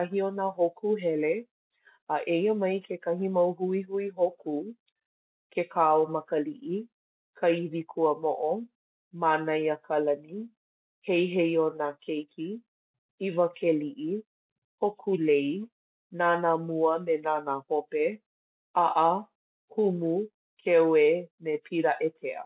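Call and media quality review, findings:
Nothing stood out on listening to the speech.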